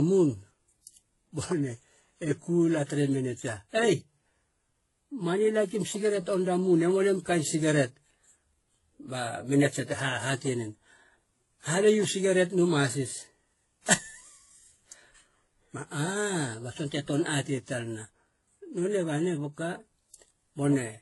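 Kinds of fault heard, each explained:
Transcoding between lossy codecs: the speech stops at 11.5 kHz and carries mixed, layered artefacts, likely from several lossy encodes in turn rather than one codec's uniform signature.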